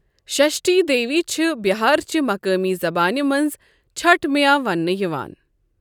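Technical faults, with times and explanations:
No technical faults are audible.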